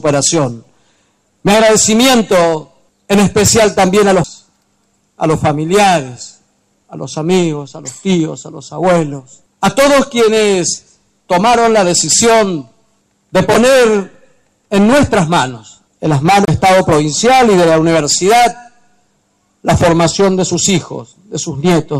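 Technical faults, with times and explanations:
4.23 s and 16.45–16.48 s, CD skip. Twice the laser jumps off its track and lands on another turn of the disc's spiral. The player mutes briefly, then resumes from that other point. The first mute is only a few milliseconds. The second lasts around 30 ms. Each gives a short tick, followed by an abrupt jump in the audio, as the playback continues from a different position on the disc.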